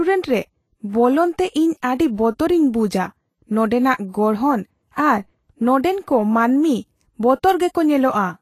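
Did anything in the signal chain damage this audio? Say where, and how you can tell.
Yes. The codec stage is the likely culprit: low-rate Vorbis compression runs throughout, quantising the treble so coarsely that fine detail turns to hiss and grain. Consonant attacks blur, and nothing remains above 14.2 kHz, which fits a bitrate near 30 kbps.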